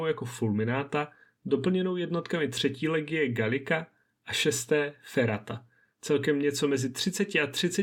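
Speech, with one fault. At 3.91 s the sound jumps ahead abruptly, with a brief blip at the join. The likely cause is a stream segment skipped. One chunk failed to load, and playback carried on from the next, losing that stretch.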